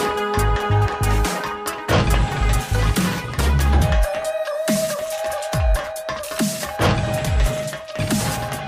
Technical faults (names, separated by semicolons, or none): none